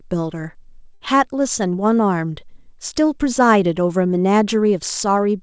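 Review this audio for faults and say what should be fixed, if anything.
A short stall from a late packet occurs at 0.94 to 1.02 s. A packet arrived late and the jitter buffer ran dry. The receiver held the last sound for about 65 ms, then resumed without losing anything. To prevent it, give the jitter buffer more headroom on this G.722 call path, which has nothing above 8 kHz.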